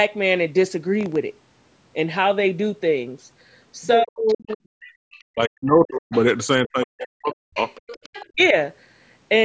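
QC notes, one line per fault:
1.01–1.16 s, processor overload crackle: the processor fell behind and missed a short string of audio deadlines in a row, a handful of very short buffers well under a millisecond each. Each missed buffer was filled with silence, so the sound is punched through with tiny hard-edged gaps. Packed this closely, the gaps merge into a brief gritty crackle lasting about 0.15 s that rides on the speech and stops as soon as the load eases.
4.01–4.61 s, 5.21–6.14 s, 6.64–7.59 s and 8.28–8.55 s, speech suppressed in double talk: these drops most likely come from the echo canceller failing to separate the talker from loudspeaker echo while both sides spoke, and attenuating everything. The talker's speech dips sharply, by roughly 40 dB at its deepest. The last and shortest dip is slightly shallower.
4.28–5.21 s, 6.13–6.19 s and 7.33–8.26 s, other side's voice leaking through: the echo canceller did not fully remove the far end's voice playing from the talker's loudspeaker, which is the likely source of a second voice in the background. 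It sits roughly 20 to 25 dB below the talker. The brief 6.13 s scrap and the longer stretches overlap the suppression dips.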